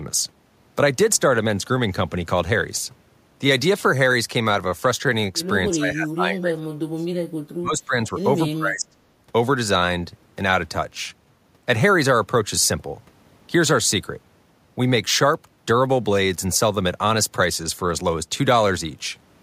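Speech with two dips, from 5.71 to 7.08 s and from 7.6 to 8.97 s. The voice sinks by up to about 30 dB. This is likely speech suppressed in double talk by the echo canceller.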